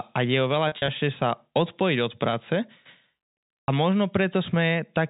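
Packet loss with pitch repetition: dropped packets at 0.68 to 0.88 s, scattered gaps with runs up to 40 ms, and again at 3.63 to 3.68 s, were bridged by repeating the last pitch period, so the speech briefly turns held and buzzy.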